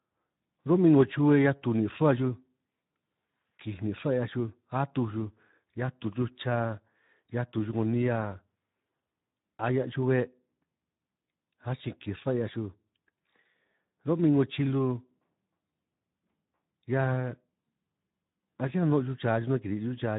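From start to finish the speech carries Speex codec damage: the excitation is starved of bits, so voicing turns hoarse and grainy, which fits a bitrate near 11 kbps. Nothing sounds above 3.8 kHz. Unlike plain band-limiting, the voice itself is roughened, not just dulled.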